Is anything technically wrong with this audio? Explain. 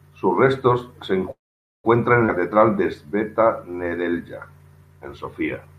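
Yes. Three separate transport faults are audible in this speech clip.

From 1.31 to 1.86 s, right after "restos se", there is a call audio freeze. The likely cause is packets held up in the network until the jitter buffer ran dry. The receiver stretched the last sound briefly, and it faded into roughly half a second of silence. When the packets arrived, the speech resumed exactly where it had stopped. Nothing was lost, but the pause pushed the whole call about 0.53 s later.

From 2.26 to 2.30 s there is a skip ahead. A stretch of audio, around 150 ms, was discarded while later audio was already queued. The drop happened either in transit or in a jitter buffer that overflowed. Playback jumps forward across a tiny gap of about 16 ms, so the two sides are joined almost directly and part of the speech simply vanishes.

From 2.40 to 4.11 s there is a jitter buffer slow-down. The buffer, running low or having just raised its target delay, rebuilt its reserve by repeating individual pitch periods and fragments of pauses. 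This added about 125 ms, so the speech plays at roughly 93% speed while keeping its original pitch. Sounds in this passage come out slightly drawn out and sluggish.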